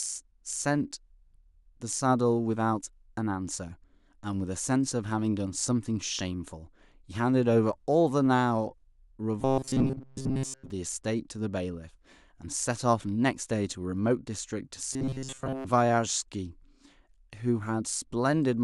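Speech, with two stretches of robotic sound from repeated short buffers. The first runs from 9.41 to 10.70 s, the second from 14.93 to 15.67 s. In both, the voice becomes a rigid, metallic buzz near 133 Hz. It still loosely tracks the speech. The likely cause is audio arriving too seldom, so a fragment of about 7.5 ms is replayed over and over. Roughly 70% of the real audio is lost in those spans.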